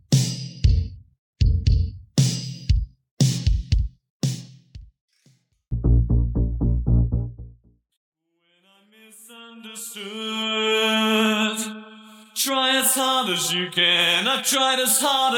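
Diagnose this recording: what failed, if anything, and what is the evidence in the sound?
Nothing failed: the sound gives no evidence of any fault at any stage.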